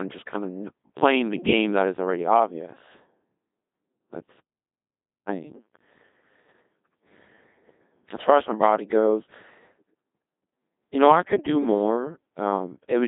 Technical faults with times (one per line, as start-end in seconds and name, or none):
0.00-13.07 Codec 2 vocoder